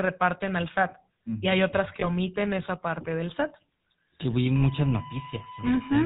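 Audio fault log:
Throughout: GSM full-rate codec. The coder models the vocal tract and drives it with sparse, regularly spaced pulses, which fits the 13 kbps full-rate GSM codec. Nothing above 4 kHz survives, and the speech carries a plainly audible buzzy, gravelly roughness.
2.00–2.10 s: lost GSM frames. Between "hay otras que" and "esa parte del", damaged data was concealed by repeating the last good frame's settings. The sound briefly holds as a rough, metallic ring, which points to a single lost 20 ms frame.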